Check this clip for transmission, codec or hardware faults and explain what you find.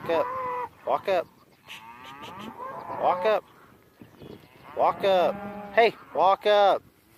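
Checking this clip turns up no faults to report.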